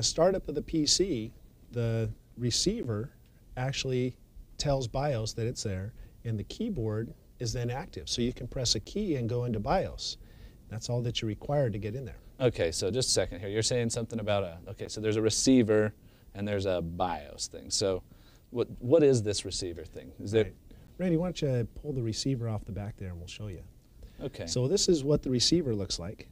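Gap between chunks at 2.83, 8.84, 14.86 and 20.87 s: the audio arrives in 6 s chunks with about 13 ms of silence at each join, heard as brief holes.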